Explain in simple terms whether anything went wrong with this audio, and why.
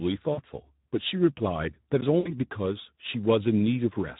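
Two things went wrong with this speech recording.

The first lasts the whole clip. It was squeezed through the Speex codec, an older speech codec from internet calls and game chat. At this quality it has too little detail to rebuild the voice faithfully. So the speech sounds noisy and hoarse, and the damage is easy to hear. The highest parts of the sound are mostly a hiss-like fill rather than real detail.

The second problem happens twice. This is VoIP packet loss concealed by the speech codec. Small pieces of the sound were lost in transit, from 0.33 to 0.41 seconds and from 2.19 to 2.33 seconds. To hide the gaps, the decoder guessed by repeating the last bit of voice it had. It turned the sound down as it went. You hear a brief buzzy or smeared fade instead of a clean gap. The voice stays weak or distorted just after each gap.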